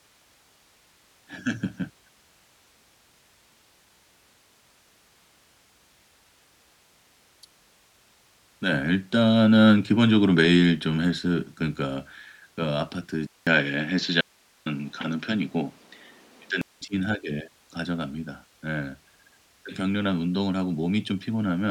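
At 13.27 s the speech goes silent for about 200 ms and then returns duller and narrower, with nothing above 7.6 kHz, a shift in level of a few decibels, and a new background noise sitting well below it. This change holds until 16.81 s, when the fuller sound comes back. It points to an input switched to a poorer device, likely a different microphone or a headset's call profile with a narrower band and its own tone and noise.

Inside that stretch, from 14.21 to 14.66 s, the speech cuts out abruptly for about 450 ms, leaving only a faint hiss far below the normal level, then snaps back mid-flow. The hard edges set it apart from a natural pause. This is an audio dropout to a faint residue, likely the wanted signal being lost while the path after the break stayed live and kept passing its own hiss.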